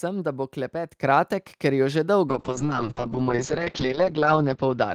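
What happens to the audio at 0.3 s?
Nothing goes wrong at 0.3 s; the speech there plays through intact, with no dropout, click or distortion.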